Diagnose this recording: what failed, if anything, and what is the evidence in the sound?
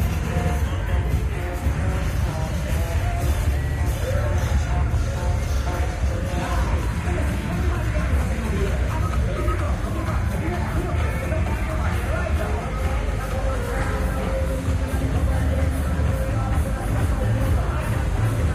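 The failure is repeated frames at the codec or storage stage. At 3.62–3.76 s a block of about 70 ms plays two extra times, adding roughly 139 ms, which fits three compressed frames of about 23 ms each. At 9.64–9.66 s a single 23 ms block repeats once. Each repeat is a brief stutter. Unlike a buffer dropout, nothing goes silent: the same material replays and the clip simply runs longer.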